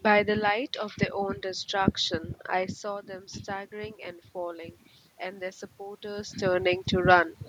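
It's a speech recording, and from 2.57 s to 6.4 s there's automatic gain rising. Around 2.5 s the talker moves away from the mic and the level drops by about 12 dB, so the AGC slowly adds about 4 dB, swelling the voice and room noise together.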